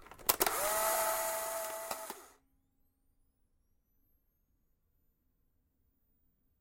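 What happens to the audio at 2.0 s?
At 2.0 s the audio is in the last part of a zipper noise fault running from 0.93 to 2.14 s. The level is lowered in unsmoothed 1 dB steps, about ten a second, by roughly 15 dB overall, and each jump leaves a small click, heard as a ticking zip riding on the sound.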